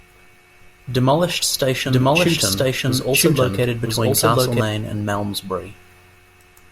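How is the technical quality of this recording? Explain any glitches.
A doubled audio track runs from 1.85 s to 4.61 s. A second copy of the speech sits about a second behind, at roughly equal loudness. It likely comes from the sound being captured twice along a slower path. The copy is dry and switches on and off abruptly.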